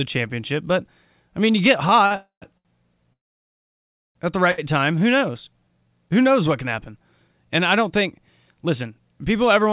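Speech heard through a narrowband call path, with nothing above 4 kHz, consistent with a G.711-type codec, shows several jitter-buffer faults. Late packets left the jitter buffer empty three times, causing a short stall from a late packet each time: the receiver held the last sound for 45 ms at 2.06–2.13 s, 72 ms at 2.58–2.67 s and 66 ms at 4.51–4.60 s, before resuming without losing anything. Packets that were likely held up in transit caused two longer call audio freezes. At 2.16–2.44 s the sound stretches out and fades, leaving a gap of 261 ms, including 110 ms of silence. At 3.13–4.17 s the gap lasts about 1.02 s and is almost entirely silent, then the speech resumes where it stopped. To rebuild its reserve, the receiver then ran a jitter buffer slow-down from 4.80 to 5.89 s, repeating pitch periods to add 130 ms, so the speech drags at 89% speed with unchanged pitch. Later the buffer held too much, and a jitter buffer speed-up from 8.12 to 9.18 s trimmed about a tenth of a second, making the speech run hurried at 110% speed.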